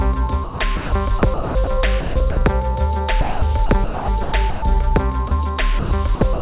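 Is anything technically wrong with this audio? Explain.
Yes. Two related faults appear.

Sound chopped by the voice detector occurs at 0.44–0.92 s, 1.19–1.72 s, 2.01–2.42 s, 3.21–4.62 s and 5.79–6.40 s. The sound breaks up repeatedly. Parts of it give way to comfort noise, about 300, 270, 210, 690 and 248 ms in total. The likely cause is a sender detector switching transmission on and off, with comfort noise played in the gaps.

Sound dropped by the voice detector occurs at 5.28–5.31 s. A 30 ms piece vanishes into comfort noise. This is likely a detector mistaking quiet sound for background and pausing transmission. The receiver fills the hole with comfort noise, so the sound briefly gives way before resuming. The whole clip stops at 4 kHz, which fits a telephone-band call codec.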